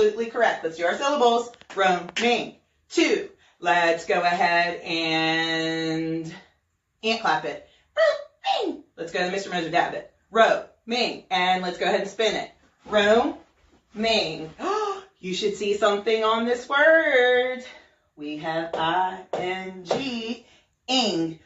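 Nothing is technically wrong with this audio.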